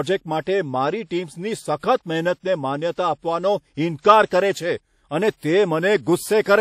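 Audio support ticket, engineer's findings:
Ringing, washy speech throughout with hiss pumping alongside the signal; nothing above about 15.6 kHz. Likely WMA compression, 48 kbps. Spectrogram: hard ceiling, smeared blocks.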